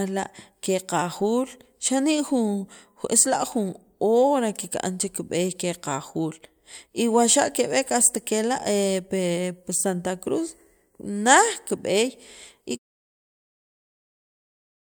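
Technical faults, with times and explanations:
No technical faults can be heard in this speech clip. Near the end, from around 13 s, the level eases down in a smooth fade-out with no click or hard edge.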